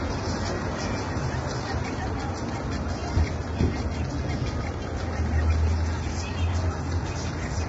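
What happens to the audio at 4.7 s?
At 4.7 s the sound is rough and grainy, with a noisy haze filling the gaps between tonal components and nothing at all above 7.8 kHz, which leaves the top dull. This runs through the whole clip rather than starting there. The likely cause is heavy low-delay AAC compression (AAC-ELD): its short frames separate harmonics poorly and need many bits, so at a rate that points to around 16 kbps the coder smears noise across the spectrum and discards the high band.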